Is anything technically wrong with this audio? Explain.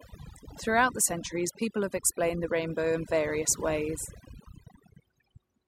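Yes. Throughout the speech there is overdone noise removal: a noise reducer set far too aggressively is cutting individual frequency bands whenever they approach its noise estimate, taking quiet parts of the voice with them. The background drops and breaks up into twinkling specks.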